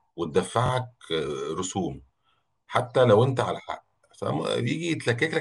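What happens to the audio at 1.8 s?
Nothing goes wrong at 1.8 s: the speech there is intact, with no dropout, click, distortion or other fault.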